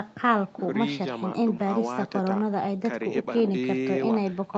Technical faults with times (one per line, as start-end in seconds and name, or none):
none